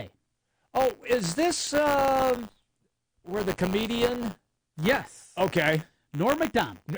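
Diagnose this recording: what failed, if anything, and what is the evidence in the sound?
A robotic rattle at 100 Hz runs through the whole speech clip and sits on the speech itself, falling away when there is no signal to carry it. This is buffer tearing at the driver or buffer stage. The writer and the hardware reader of the ring buffer have drifted so their positions cross inside each period, which fits a 10 ms buffer. A small slice of every period, a few percent, replays audio from roughly 20 ms earlier, with hard joins on both sides.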